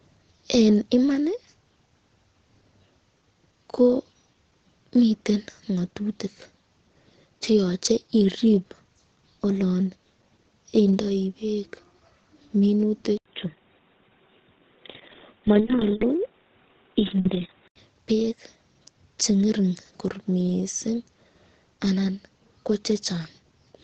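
From the start the speech sounds muffled and plainly hoarse, with nothing above 8.9 kHz; a spectrogram shows a flat ceiling there. This is likely Opus compression in its SILK speech mode, at a rate that fits roughly 16 kbps.

From 13.18 s to 17.76 s the input likely switched to a poorer device. An 80 ms gap opens in the waveform, then the sound turns boxy, the spectrogram cut off at 3.8 kHz, with faint new hiss far beneath the signal and level much the same.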